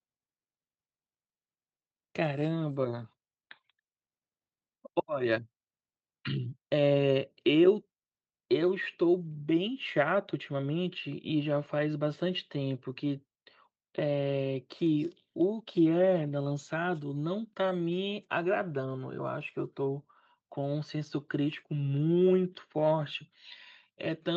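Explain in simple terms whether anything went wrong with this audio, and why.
Nothing went wrong here: the speech came through an ordinary internet call connection, and the trimmed, call-like top end you can hear is simply how that kind of line normally sounds.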